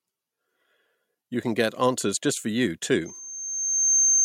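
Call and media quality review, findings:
Loudspeaker feedback squeal, 3.05 s to 4.25 s, running to the end of the clip. Single tone at 6.3 kHz swells over about a second until it sits a few dB above the speech. Likely component is an open mic picking up its own speaker, with loop gain above one at 6.3 kHz so that tone keeps feeding itself. Worth checking mic and speaker placement and the room EQ.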